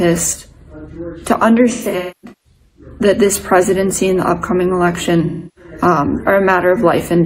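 AAC frame loss with concealment appears from 1.71 to 2.88 s, where about 0.73 s of audio drops out in pieces scattered across roughly a second, the longest gap around 0.3 s. The decoder patches each gap from the last good spectrum, so the sound turns smeared, noisy and phasey. A second loss of about 0.3 s at 5.26 to 5.71 s gives a shorter smeared, phasey patch.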